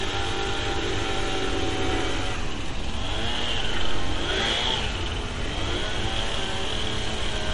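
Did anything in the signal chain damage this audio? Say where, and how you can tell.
Yes, at the codec stage, most likely MP3 compression, across the whole clip. The audio stops dead above 10.5 kHz, and weak detail flickers in a watery, swirly way, which fits an encoder short of bits at a low rate near 40 kbps trimming the treble and dropping faint frequency lines.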